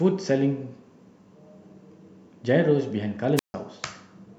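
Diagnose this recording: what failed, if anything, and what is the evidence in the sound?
Wireless microphone squelch dropout, on the analogue radio link ahead of everything else. Around 3.36 s the speech gets a quick swell of hiss, then the receiver's squelch mutes it for about 150 ms, and the voice returns by 3.54 s. Fading RF caused the mute.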